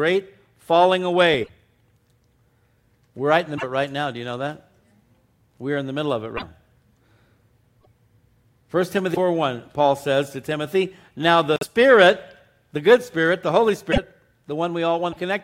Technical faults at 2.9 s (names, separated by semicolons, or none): none